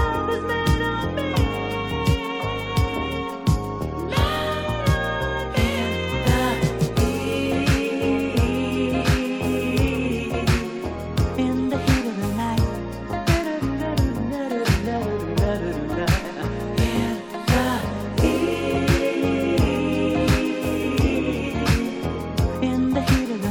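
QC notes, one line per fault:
7.00, 9.88, 13.44 and 16.11 s: bit error spike, four isolated sharp ticks, each a single corrupted sample jumping by a power of two, broadband and unrelated to the sound.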